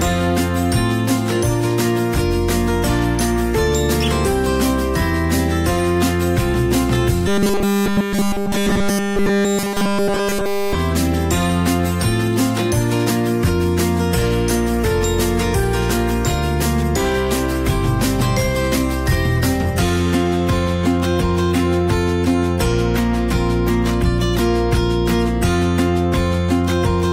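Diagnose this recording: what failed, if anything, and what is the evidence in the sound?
From 7.28 to 10.75 s the sound turns into a rigid, metallic buzz at 200 Hz. It tracks the material only loosely. Essentially none of the real audio gets through in that stretch. This is robotic sound from repeated short buffers, and the likely stage is the driver or buffer. Fresh audio stopped arriving in time, so the playback side kept looping its last chunk. A 200 Hz buzz means each repeated piece was 5 ms long.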